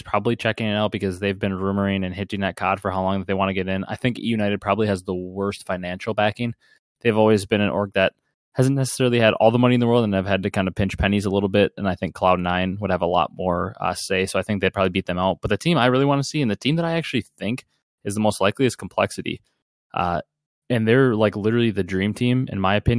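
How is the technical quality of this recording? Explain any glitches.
Listening through this speech recording, nothing stood out as a glitch or technical problem.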